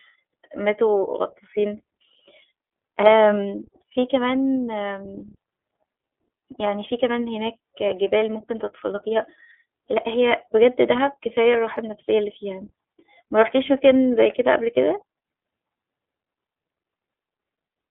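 From start to finish the speech runs through an iLBC codec, and the damage is plain to hear. The band is squeezed to a phone line's 300 Hz to 3.5 kHz, so it sounds thin and boxy with no air on top. Each frame's excitation is coded without help from the one before, giving a slightly rough, synthetic edge. The texture fits iLBC's 30 ms frame mode at around 13.33 kbps.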